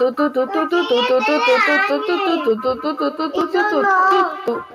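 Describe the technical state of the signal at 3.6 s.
At 3.6 s the speech carries feedback echo between two devices, running from 2.62 s to the end. A second device replays this signal into a nearby microphone, so each syllable returns roughly every fifth of a second, peaking about 16 dB below the direct speech.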